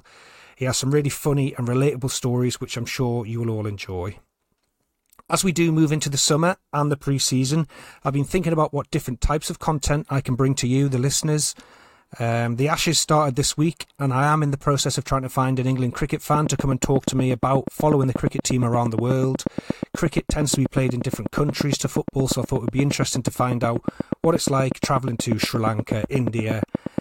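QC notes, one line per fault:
16.35–26.99 s: train of clicks. A regular ticking at about 8.4 clicks per second, roughly a hundred near-identical pulses standing well above the speech, around 10 dB, audible in pauses too. The steady pulse rate points to likely interference from nearby equipment or a faulty connection or power supply.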